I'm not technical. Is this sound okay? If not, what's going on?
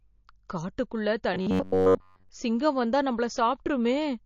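No. The speech was likely squeezed hard by MP3 compression, which discards the treble, so everything sounds dull, watery and smeared throughout. From 1.34 to 2.29 s, just before "சிங்கம் வந்தா", the system likely keeps replaying tiny chunks of about 11 ms, the robotic sound from repeated short buffers, turning most of that stretch into a stiff, metallic buzz around 94 Hz.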